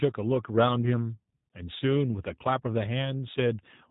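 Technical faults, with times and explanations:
Throughout, G.729 codec: the speech sounds a bit rough and synthetic, with plainly audible codec damage and nothing getting through above 3.8 kHz. That's the signature of a low-rate VoIP coder that throws away the actual waveform and rebuilds each short frame from a vocal tract filter, a pitch predictor and a handful of pulses. The result stays intelligible but loses natural texture, which fits an 8 kbit/s G.729A stream.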